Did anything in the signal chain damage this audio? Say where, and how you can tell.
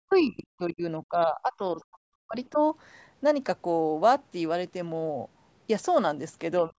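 Yes. The damage happens in the call-processing stage, in the echo canceller. Speech is suppressed in double talk from 0.00 to 2.58 s and again from 6.67 to 6.78 s. Across roughly two seconds of that first stretch, the level dips and drops out in pieces, reaching about 40 dB down at its deepest. On the waveform the envelope collapses in ragged chunks. On a spectrogram the energy thins and leaves gaps, with the upper harmonics fading. The likely cause is that the canceller could not tell the near talker from loudspeaker echo, so it attenuated both.

The other side's voice leaks through briefly, from 0.12 to 0.20 s, at roughly 35 dB below the main speech. It is a faint scrap. It likely appears because echo from the loudspeaker was not fully subtracted from the microphone signal. On a spectrogram it shows as a weak, separate smear of energy that does not line up with the talker's harmonics. 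On the waveform it is a barely visible ripple. The call's normal microphone processing leaves nothing above 8 kHz.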